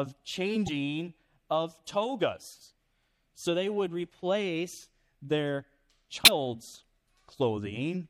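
MP3 compression runs through the whole speech clip and is plainly audible. The likely cause is an encoder starved of bits, consistent with a low bitrate around 64 kbps: weak frequency lines flicker on and off, leaving a watery, swirly texture. Damaged data in a compressed stream breaks through at 0.64 to 0.69 s and again at 6.23 to 6.28 s. Each time, the decoder misreads corrupted frames and resyncs, producing a brief chirp or blip of roughly 40 to 50 ms.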